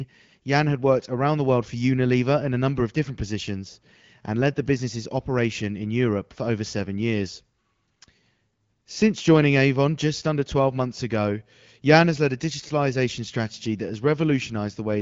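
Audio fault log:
No faults found; the speech runs over an AMR wideband (HD Voice) path at 12.65 kbit/s, a rate at which it stays clear with only light coding effects.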